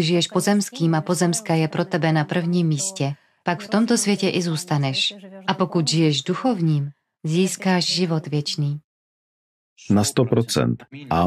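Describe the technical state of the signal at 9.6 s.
At 9.6 s the signal is intact, with no dropout, distortion, clipping or other fault to be heard at that point.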